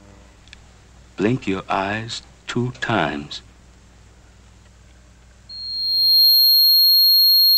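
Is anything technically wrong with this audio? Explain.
Yes. From 5.49 s to the end at 7.57 s there is loudspeaker feedback squeal. A microphone is picking up its own loudspeaker. At 4.2 kHz the loop gain exceeds one. That tone builds over about 0.7 s. It ends up about 10 dB above the sound.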